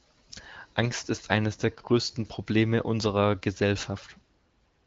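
Nothing in this speech recording registers as a technical fault; the top of the spectrum stops near 7.7 kHz, and the sound points to the AMR wideband (HD Voice) codec running at one of its higher rates, around 18 kbit/s, with any coding damage faint at most.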